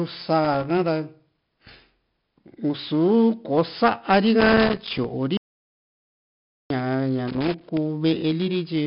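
Speech, and the whole thing runs through heavy 4-bit ADPCM compression: every louder stretch carries a gritty hiss riding on the level, and nothing above 5.3 kHz survives, which fits a roughly 11 kHz sample rate at 4 bits per sample, so it sounds dull as well as grainy. Loose connector crackle shows up three times, at 0.44 to 0.66 s, 4.40 to 5.04 s and 7.28 to 7.77 s. Each is an irregular scratchy burst where a bad contact chopped the signal on and off. Then from 5.37 to 6.70 s there's an audio dropout to silence. That's 1.33 s of dead silence with no room tone at all, so whatever was said there is simply gone. The likely cause is the input briefly losing its link while the recorder kept writing.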